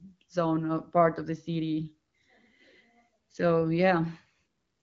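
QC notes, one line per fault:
No faults heard in this speech clip.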